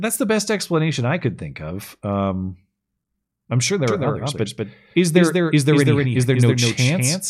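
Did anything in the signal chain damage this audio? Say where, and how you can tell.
Yes. From 3.88 s, right after "I'm sure", the speech gets a doubled audio track that runs to the end. A second full-band copy trails the original by about a fifth of a second, roughly 5 dB quieter, with no decay or room colour, and it starts abruptly. That points to the capture or driver stage, most likely the same signal being picked up a second time through a slower path and mixed back in.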